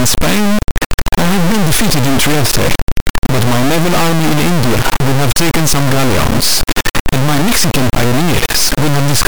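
Throughout, integer read as float, fitting 32-bit integers read as floats, slams the waveform between zero and clipping: a loud square-wave buzz, broadband on a spectrogram.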